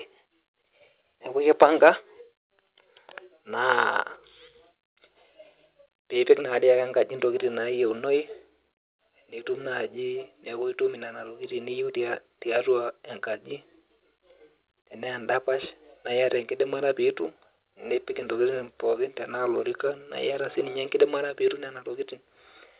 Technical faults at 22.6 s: microphone volume stepped up

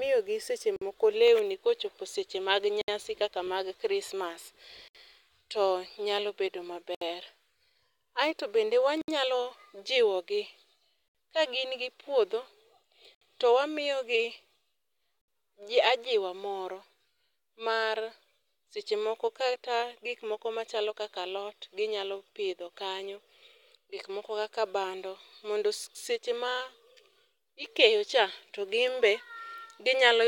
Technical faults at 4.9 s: gap at a join of encoded pieces

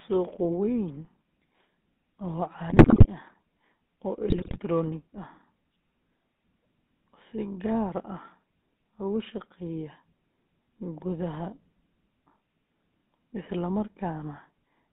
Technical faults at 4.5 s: GSM full-rate codec; GSM bit errors

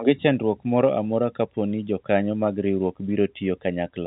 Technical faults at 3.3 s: none

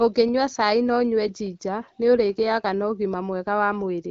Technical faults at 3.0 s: none

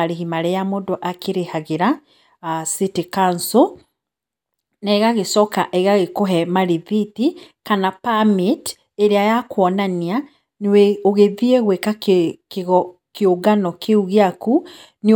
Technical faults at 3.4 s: none

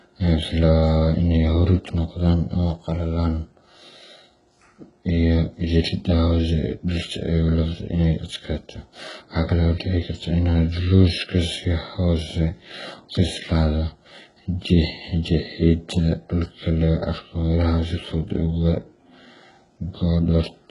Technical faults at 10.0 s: HE-AAC compression

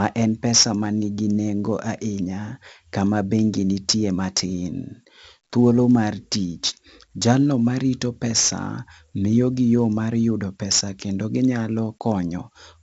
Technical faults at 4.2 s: 4-bit ADPCM compression

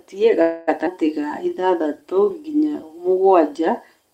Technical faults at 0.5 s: call audio freeze

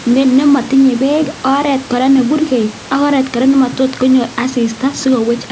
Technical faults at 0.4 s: none

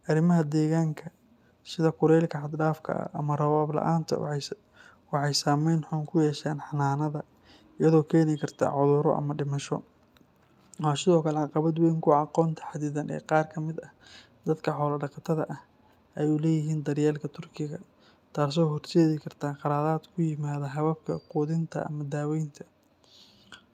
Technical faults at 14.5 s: none

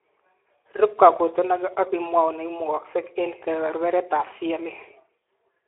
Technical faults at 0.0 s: Speex codec

